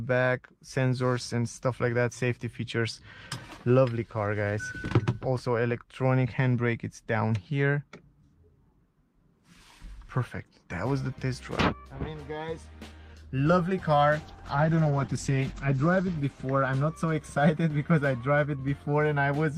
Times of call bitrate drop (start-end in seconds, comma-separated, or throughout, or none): 14.16-17.75